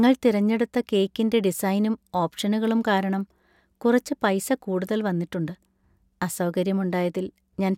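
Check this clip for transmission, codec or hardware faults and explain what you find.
No transmission, codec or hardware faults turn up anywhere in this speech recording; the signal stays continuous and intact throughout.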